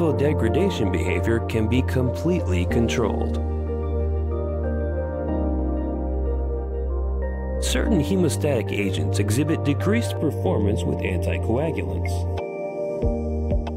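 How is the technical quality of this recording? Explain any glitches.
The recording has one clear fault in its final few seconds. Channel delay (comb filtering) runs from 10.17 s to the end: one channel arrives less than half a millisecond late, and when both are summed to mono, the shared content cancels at evenly spaced frequencies starting near 1.5 kHz. This leaves the sound hollow and phasey.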